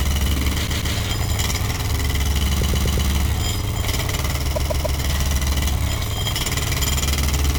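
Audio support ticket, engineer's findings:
Repeated frames in the compressed stream: runs of frames written or sent more than once, so the decoder plays the same stretch again. Stutter at 0.66–0.95 s (144 ms block, twice more), 2.61–3.09 s (120 ms block, four more), 4.55–4.98 s (144 ms block, three more). Block lengths fit runs of five to six frames. Adds 288, 480, 432 ms.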